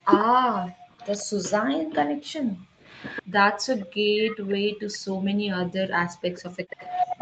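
From 0.03 to 0.62 s the speech sinks in pieces, dropping by roughly 40 dB for about 0.3 s in total. This is speech suppressed in double talk, likely an echo canceller ducking the talker while the far end also spoke. It differs from plain dropouts because the dips follow the overlap rather than the network.

Overlapping this, from 0.07 to 1.26 s, a copy of the voice trails the original by 140 ms at about 10 dB below it. That is an echo leak, likely residual loudspeaker pickup the canceller failed to subtract. The fixed delay marks it as echo rather than room reverberation, which would smear continuously instead of repeating.

Between 0.90 and 0.99 s the room tone dips by about 12 dB, then recovers. This is background gated by the echo canceller. Only the ambience pumps down, for about 0.1 s.

From 2.08 to 6.70 s the same gating returns far harder. The background falls by up to about 40 dB and is missing for roughly 2 s in total, so the noise floor audibly switches off and on.

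The echo leak recurs from 2.85 to 4.54 s, again 140 ms behind and about 15 dB down. It appears once more from 6.36 s to the end at about 10 dB down. The constant delay points to the same leaking loudspeaker path each time. Throughout, the Opus call path limits the audio to 8 kHz, as expected at that bandwidth.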